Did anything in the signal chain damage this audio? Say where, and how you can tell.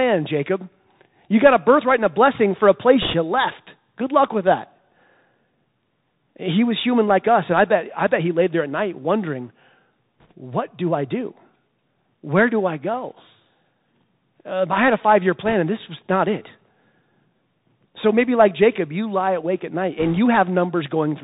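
Yes. At the codec stage, the whole clip passed through the Bluetooth CVSD headset codec at 64 kbps. As a narrowband codec it passes nothing above 4 kHz, so the speech sounds narrow and muffled. Sibilants turn scratchy, louder bright moments distort as the step size lags, and a granular hiss sits underneath throughout.

On the wireless link, four short bursts of bit errors on a Bluetooth voice link corrupted the CVSD stream. They fall at 3.02–3.14 s, between "a blessing for a" and "you left"; at 10.20–10.32 s, just before "what do I do"; at 15.45–15.53 s; and at 19.99–20.19 s, right after "lie awake at night". Each flipped bit nudges the waveform only slightly before the error fades, so there are no hard clicks. Instead, an error rate of around 1.5 to 2 percent produces a brief rushing crackle over the speech.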